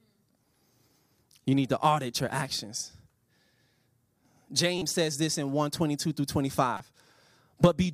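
At 4.78 to 4.82 s, just before "says this in", a corrupt frame decoded produces a short glitch. A damaged single frame sends energy to wrong frequencies. A second glitch occurs, quieter, at 6.77 to 6.80 s.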